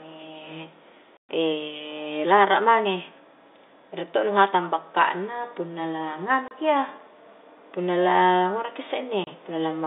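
Hard-edged gaps cut through the speech three times: a long dropout from 1.17 to 1.29 s lasting 120 ms, then two brief 30 ms holes at 6.48 and 9.24 s. This is packet loss filled with silence. The receiver got nothing for those stretches and played digital silence instead. The lengths point to 30 ms packets, with the first gap fitting four lost in a row, all within a narrow telephone-band G.711 line.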